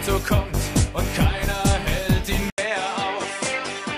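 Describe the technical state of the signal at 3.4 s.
At 3.4 s the sound is band-limited to 10.6 kHz, slightly quieter, with a new noise floor, after an 80 ms gap at 2.5 s; likely an input switched to a poorer device.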